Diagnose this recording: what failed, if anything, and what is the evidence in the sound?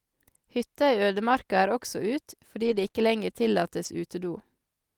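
Network packet loss rebuilt from error correction at 2.63–2.85 s and 3.85 s: low-bitrate copies play instead, sounding rough and noisy, with a blurred spectrogram.

Short concealed packet loss at 2.87–2.91 s and 2.91–2.95 s: the decoder extended the preceding sound, heard as a brief smear.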